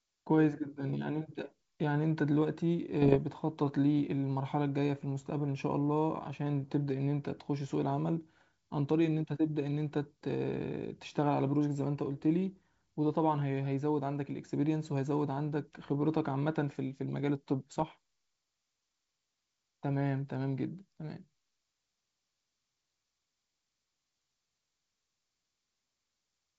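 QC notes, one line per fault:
3.02–3.17 s, bit errors on an ADPCM link: pops and a rough burst with level jumps at about 1% error rate; corrupted step size and predictor keep the disturbance ringing.
17.71–17.84 s, bit errors on an ADPCM link: a shorter, milder crackle at a lower error rate, well under 1%, on the G.722 stream, again smeared by decoder state recovery.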